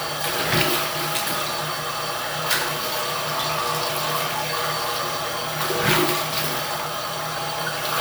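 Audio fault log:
No fault found in the audio fault log.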